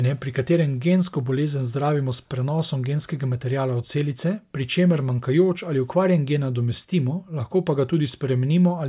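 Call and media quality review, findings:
Nothing to flag on this speech recording; no audible faults turned up anywhere in it.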